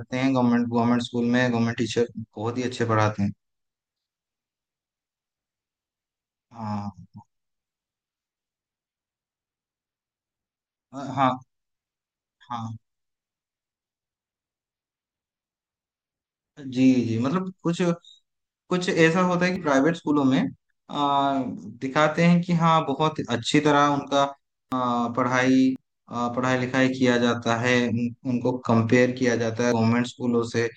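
At 19.56 s, 24.72 s, 25.76 s and 29.72 s the speech jumps abruptly with no gap of silence, as if a short slice were cut out. The first and third skips remove roughly 40 ms, the second and fourth nearer 70 ms. The likely cause is a dropped buffer (overrun): the capture software fell behind, the hardware overwrote samples not yet read, and the surviving audio on either side was butted together.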